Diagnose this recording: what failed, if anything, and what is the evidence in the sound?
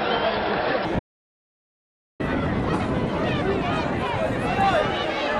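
There's an audio dropout to silence from 0.99 to 2.20 s. The sound cuts off abruptly and returns just as abruptly, with about 1.2 s of silence and no room tone in between. That's likely a lost input link or momentary disconnect upstream while the recorder kept writing.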